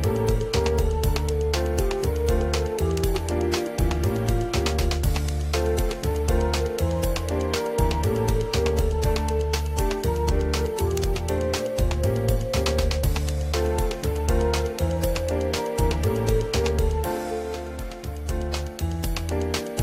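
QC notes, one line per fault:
No faults found in this clip. Nothing in the audio calls for a QC entry.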